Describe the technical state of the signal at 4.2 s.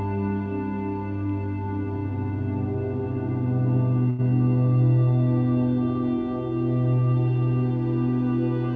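At 4.2 s the music sits inside a short stall from a late packet (4.10 to 4.24 s). The jitter buffer ran dry, and about 88 ms of stretched sound bridged the gap, so a held tone drones slightly. A spectrogram shows frozen, flattened partials, and the waveform repeats cycles.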